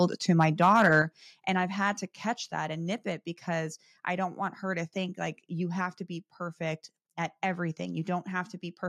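From 0.4 to 0.94 s the loudest syllables carry a harsh, crackling edge: microphone overload, with peaks driven about 4 dB past the converter's ceiling so their tops are sliced flat. Only a small share of the waveform is affected, so the crackle flares on peaks rather than coating every sound. Unlike codec distortion, which smears and warbles the sound, this is a gritty buzz locked to the instants of highest level. The likely cause is an input volume set too high.

At 1.02 s the speech and the background fall together by about 7 dB in one instant, and at 2.34 s they drop again by about 3 dB. This is microphone volume stepped down, most likely the call software cutting the device's input gain after that distorted stretch. What separates it from a compressor or automatic gain control is that the change is an abrupt step with no ramp or recovery, and the background noise drops by exactly the same amount as the speech.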